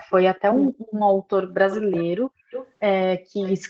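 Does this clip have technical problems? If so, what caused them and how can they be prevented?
Yes. Between 0.49 and 0.73 s the speech is suppressed in double talk: it dips by up to about 25 dB over roughly 150 ms in total, likely because the echo canceller heard both sides at once and turned everything down. Better double-talk detection in the canceller, or a headset, prevents it.

There's also echo leak at 0.66, 1.49, 1.70–2.05, 2.50–2.71 and 3.41–3.57 s. It's a delayed copy, 238 ms behind early on and 339 ms later, from about 35 dB down up to about 10 dB below the speech, likely from loudspeaker audio slipping past the far end's canceller. Headsets or a properly tuned echo canceller stop it.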